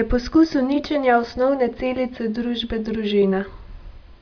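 No technical faults occur anywhere in the recording. Nothing in the speech calls for a timestamp or a closer look.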